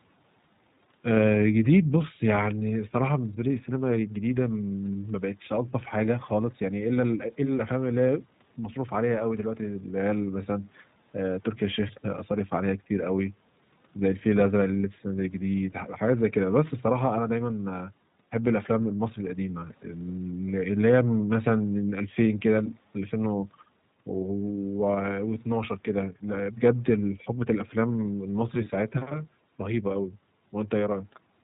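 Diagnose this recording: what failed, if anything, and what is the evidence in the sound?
The failure is at the codec stage: the speech has passed through the iLBC codec for its whole length. Nothing is left above 4 kHz, so the sound is narrowband, and a rough, slightly synthetic buzz sits under the speech because each 20 ms frame's excitation is coded on its own, with no carry-over from the last. The roughness is plainly audible and fits the 15.2 kbps mode. A spectrogram shows a hard ceiling at 4 kHz and smeared, grainy harmonics.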